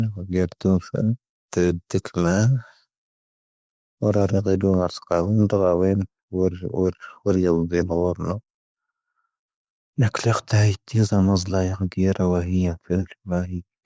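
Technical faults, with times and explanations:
The speech signal holds steady and continuous, with nothing in the audio path disturbing it.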